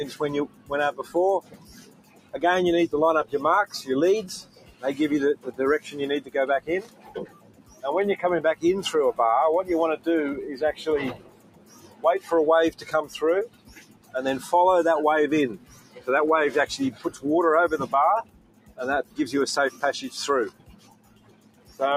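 A speech-oriented noise suppressor has been left running on non-speech material across the whole clip, so gain swings of around 20 dB follow the content. The suppressor treats sustained tones, ambience and reverberant tails as background noise and pulls them down, while sharp onsets pass mostly intact, which makes the level pump and the sound thin out between attacks.

The sound cut by the noise suppressor is clearest in seven stretches where steady or decaying material sinks by up to about 16 dB:
0.11–2.37 s (roughly a second and a half affected),
4.42–7.84 s (about two seconds),
10.78–14.14 s (about two seconds),
15.57–16.08 s (about 14 dB, half a second),
16.91–17.24 s (about 13 dB, a few tenths of a second),
17.85–19.18 s (under a second), and
20.5–21.8 s (roughly a second and a half).

In each of these stretches, tails are cut short or held sound fades under the transients.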